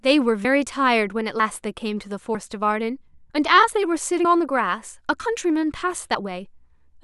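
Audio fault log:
0.45, 1.40, 2.35, 3.30, 4.25, 5.20 and 6.15 s, audio missing between chunks: the sound jumps forward at each point with no gap, losing roughly 50 ms, at nearly one-second intervals. This likely comes from a recorder working in 1.0 s chunks and dropping material at each handover.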